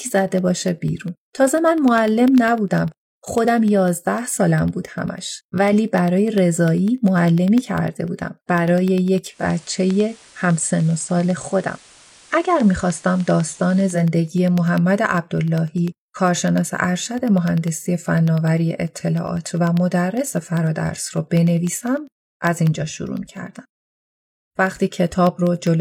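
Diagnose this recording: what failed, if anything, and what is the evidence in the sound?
Driver or buffer stage: periodic USB or driver dropouts, ticks every 0.1 s from 0.08 to 25.67 s. Each is a silent gap of a fraction of a millisecond, seen as evenly spaced vertical lines on a spectrogram.

Receiver stage: digital radio blending to analogue FM from 9.26 to 14.1 s, with 240 ms cross-fades. The spectrogram shows hiss about 30 dB down, with level unchanged.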